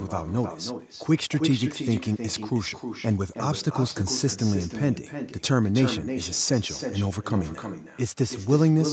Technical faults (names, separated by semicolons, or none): echo with no canceller